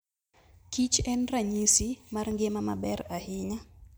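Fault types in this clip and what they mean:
Nothing stood out on listening to this speech recording.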